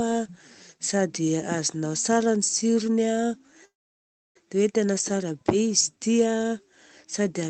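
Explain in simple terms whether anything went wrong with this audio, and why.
Something did go wrong. At 3.65 s the speech suddenly stops, and the gap lasts until about 4.37 s. This is a call audio freeze. The likely cause is that data packets were held up on the network, so the call's waiting buffer ran dry. The receiver filled the pause, mostly with silence. Nothing was lost. The speech picks up where it stopped, just about 0.7 s late. The call's codec also trims the sound above about 8 kHz.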